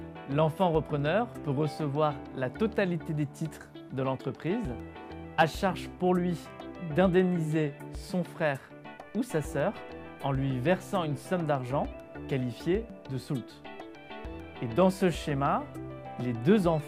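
No technical faults can be heard anywhere in the recording. Nothing interrupts or alters the sound at any point.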